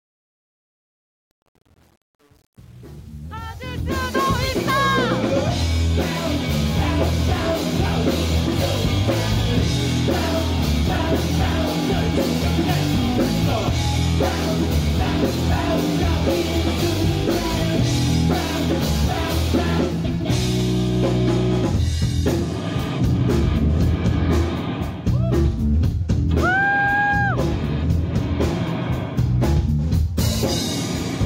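From 0.0 to 4.18 s the fade-in shows truncation distortion. The level stage keeps only 8 bits without dither. Up to 3.65 s it sounds gritty.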